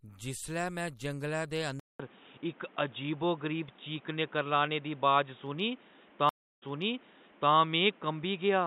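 At 1.80 s the speech drops out for 0.2 s, then returns duller and boxy, cut off above 3.8 kHz, shifted in level by a few decibels, over a new noise floor about 30 dB down, likely an input switched to a poorer device. At 6.29 s a stream reconnect leaves a 0.33 s silence, after which the audio resumes about 0.9 s earlier, repeating a stretch as the fresh decoder picks up the resent data.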